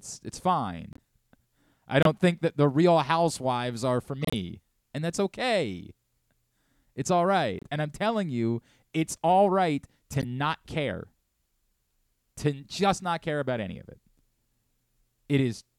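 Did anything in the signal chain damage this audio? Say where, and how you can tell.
Yes, the codec stage. Corrupt frames were decoded, producing short chirps and noise blips at 0.93, 2.03, 4.22, 7.59 and 10.11 s. Flipped bits scattered energy across wrong frequencies for a few frames each time.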